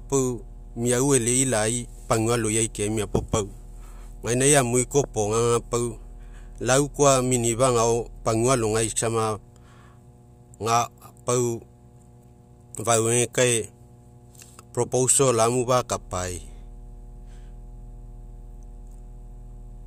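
A steady mains hum runs under the speech from start to finish, a low tone at 60 Hz with some low harmonics above it. Power-line energy is leaking into the signal path through a ground loop or nearby transformer, sitting roughly 25 dB below the speech.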